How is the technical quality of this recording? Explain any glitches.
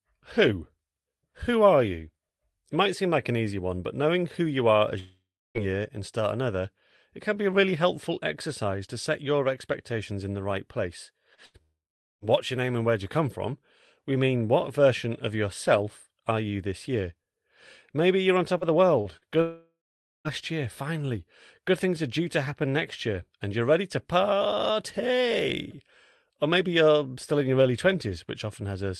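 The recording has repeated network glitches over a call link whose audio tops out around 12 kHz, as Opus-style call coding does. The three long gaps and a cluster of short losses near 11.4 s are among them.

Long network dropouts at 4.99–5.58 s, 11.62–12.25 s and 19.41–20.28 s: the last sound stretches into a fading buzz or hiss, then goes dead for roughly 0.3, 0.45 and 0.5 s before speech resumes with a piece gone. The likely cause is that no packets arrived for over half a second each time, so the receiver could only extrapolate briefly.

Short concealed packet loss at 11.35–11.41 s: a quick smear or wobble, with about 40 ms of real audio missing. The decoder got nothing in time and filled the hole by extending the preceding sound, then blended back into the incoming stream.

Burst of packet loss at 11.46–11.57 s: about 80 ms vanishes and is replaced by a held, dimming tail of the previous sound. 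Several consecutive packets failed to show up, so concealment ran longer and was turned down as it went, just before the second long dropout.

Repeated packet loss (robotic sound) from 18.58 to 19.24 s: speech turns choppy with pieces missing. Three separate gaps, the longest about 45 ms, were each patched by continuing the last sound, so roughly a sixth of that stretch is synthetic fill.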